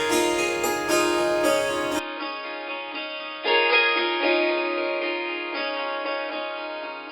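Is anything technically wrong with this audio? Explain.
Yes. From 1.99 s to the end, the input appears to switch to a poorer device. The sound turns dull and boxy, with nothing above 5.1 kHz. It drops around 5 dB, with a faint new noise floor and no gap. The likely cause is a narrower-band microphone taking over mid-recording.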